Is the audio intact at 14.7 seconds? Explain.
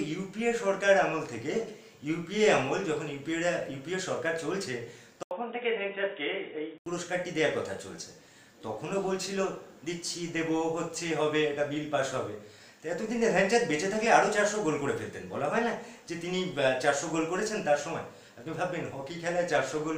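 Yes, the audio is intact at 14.7 seconds, with no fault at that moment.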